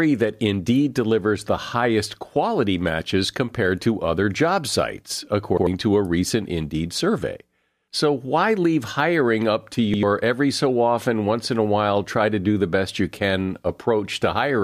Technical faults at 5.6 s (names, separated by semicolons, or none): repeated buffer